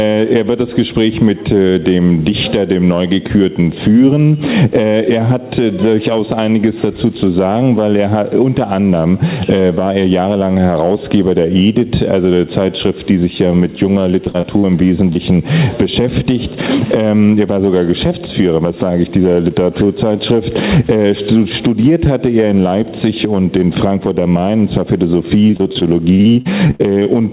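Right through the clip there's gain pumping: the gain swings by about 10 dB, most likely a fast limiter fighting gain set way too hot.

From 14.24 to 14.65 s comes repeated packet loss with the robotic sound. Four quick holes, the longest about 41 ms, get patched by stretching the last sound, so roughly a third of that stretch turns choppy.

Just after, at 15.13 to 15.17 s, there's a short concealed packet loss. About 20 ms went missing and was filled in, leaving a tiny smear or wobble.

The repeated packet loss returns from 25.47 to 27.07 s, and it's longer this time. Fifteen holes of up to 43 ms are patched over, about a quarter of the span, giving a sustained robotic, broken-up texture. All of this sits on a telephone-band G.711 path, so nothing is heard above 4 kHz.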